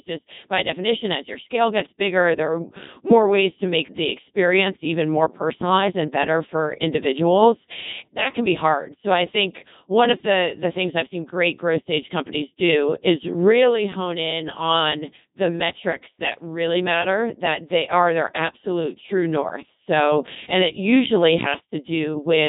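Codec 2 vocoder damage runs throughout: heavy resynthesis from pitch, voicing and envelope, likely around 2.4 kbit/s, leaves speech robotic and buzzy, with nothing above 3.8 kHz.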